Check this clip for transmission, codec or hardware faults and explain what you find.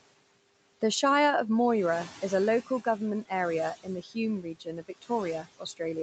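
Two related faults come from the noise suppressor in the call chain: steady suppression artefacts throughout, and four short spots where it also turned down the speech itself. The audio above 8 kHz is missing, which points to wideband call coding.

Noise suppressor artifacts run through the whole clip. The suppressor estimates the steady background in each frequency band and lowers those bands frame by frame, here by about 18 dB. Between phrases the room noise falls away, then comes back underneath the speech when the suppressor has to let those bands through.

Speech cut by the noise suppressor occurs at 3.83–4.16 s (just after "a local government area"), 4.42–4.67 s, 4.83–5.10 s and 5.43–5.80 s. In each case the suppressor treated low-level parts of the speech as noise and pulled them down with the background, by about 13 dB in the first three and about 15 dB in the last. Only brief pieces are hit, roughly a fifth of a second in the first spot and about a tenth in each of the others. 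Those fragments sound swallowed or faded.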